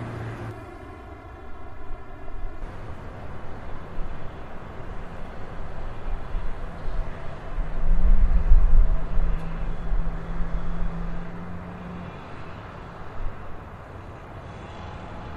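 From about 0.51 s to 2.62 s there's channel delay causing comb filtering. One side of the signal arrives roughly 3 ms behind the other, and once the two get folded to mono, anything they share cancels at regularly spaced frequencies, starting somewhere around 150 Hz and repeating up the spectrum. You hear it as a hollow, phasey colour that sits on the sound for that stretch, since the notches stay put.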